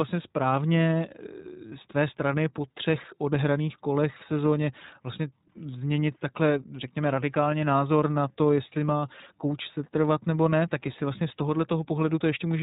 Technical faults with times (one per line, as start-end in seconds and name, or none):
0.00-12.62 iLBC codec